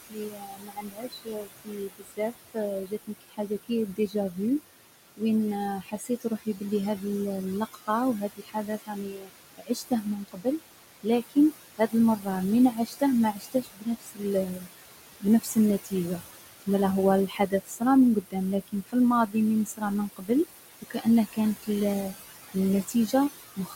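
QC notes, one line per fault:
throughout: noise suppressor artifacts. The suppressor cuts the room noise, which sits about 11 dB below the speech, by about 18 dB between phrases, so it rises and falls under speech.
0.02–4.38 s, 5.81–7.04 s, 7.74–16.68 s, 17.28–23.75 s: speech cut by the noise suppressor. Soft consonants and quiet endings are mistaken for noise and pulled down by about 17 to 22 dB, so they sound swallowed. In all, several seconds of speech are affected.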